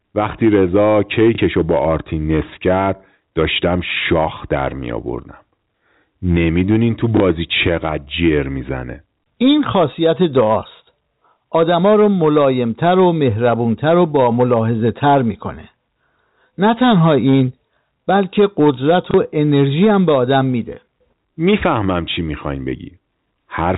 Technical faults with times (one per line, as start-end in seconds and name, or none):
0.00-23.78 hard clipping
1.35-1.38 packet loss with last packet repeated
7.17-7.20 packet loss with last packet repeated
19.11-19.14 packet loss with last packet repeated